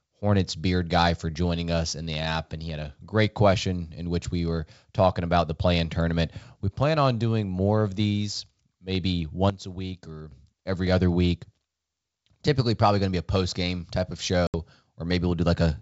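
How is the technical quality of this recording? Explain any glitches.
The recording has two glitches. Its G.722 wideband telephone coding at 64 kbit/s adds little or no audible damage of its own.

From 9.50 to 10.32 s there is a sudden gain jump. The level falls by about 11 dB in a single step and returns just as abruptly. The likely cause is a digital gain change applied between two samples with no ramp. The speech and the background noise drop together, which separates it from a talker moving away or a compressor pumping. Both of those would change level gradually, and a compressor would leave the noise floor behind.

From 14.47 to 14.55 s there is packet loss on an ADPCM call. About 70 ms of audio, roughly seven packets, is replaced by a hard-edged silence. Because ADPCM codes each sample relative to the last, the decoder's predictor and step size lose track of the sender's during the gap. 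The speech therefore comes back slightly distorted, before settling within some tens of milliseconds. That unsettled return is what marks it as codec desynchronisation rather than a simple dropout or mute.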